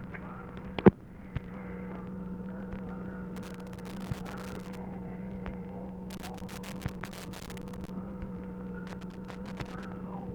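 Three bursts of loose connector crackle break into the sound: from 3.36 to 4.77 s, again from 6.10 to 7.89 s, and a shorter one from 8.87 to 9.85 s. Each is an irregular spatter of scratching and crackle, the kind you get when a worn or dirty contact shifts and keeps making and losing the connection. The signal gets chopped on and off many times a second.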